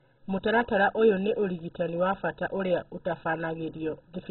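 Speech, likely put through MP2 compression at a very low bitrate, one pointing to around 16 kbps. Starved of bits, the encoder has switched off its upper sub-bands, leaving nothing above 4.1 kHz, and coarsely quantised the rest, so the whole clip sounds dull, gurgling and granular.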